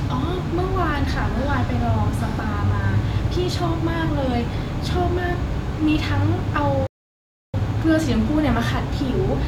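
A playback stall runs from 6.87 to 7.54 s, cutting the speech off in mid-flow with about 0.67 s of dead silence before it carries on. The output simply stops and later resumes. The likely cause is the player running short of buffered data, or its playback thread being held up, so nothing reached the output until it recovered.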